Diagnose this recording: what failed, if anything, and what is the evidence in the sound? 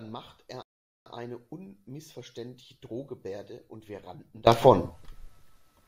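One channel inverted from 0.0 to 4.47 s: the speech drops by about 22 dB, likely a reversed-polarity wiring fault cancelling shared content when summed.

Playback stall from 0.62 to 1.06 s: speech halts for 435 ms of silence, then resumes, likely a playback buffer underrun starving the output.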